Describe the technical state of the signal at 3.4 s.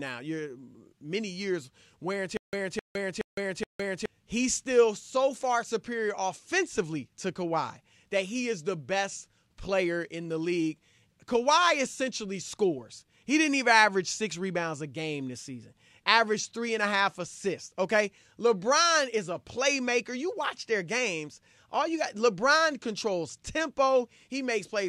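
Stutter with silent gaps runs from 2.37 to 4.06 s. A burst of about 261 ms repeats four times, each followed by 160 ms of digital silence, every 422 ms. This is likely a stalled player or stream replaying its last fragment, so the intended audio is lost.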